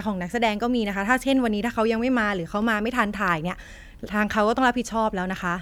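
Nothing goes wrong anywhere in this bit of speech, so there's no technical fault to point to at any moment.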